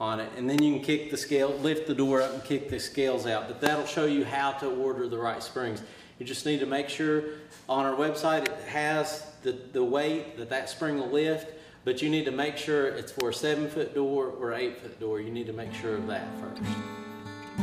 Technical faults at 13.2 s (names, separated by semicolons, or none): electrical switching spike